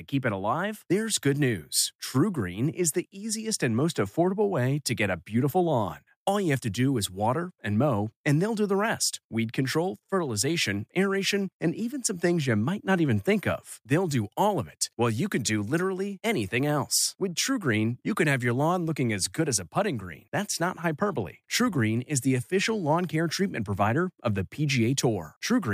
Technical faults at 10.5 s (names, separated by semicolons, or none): none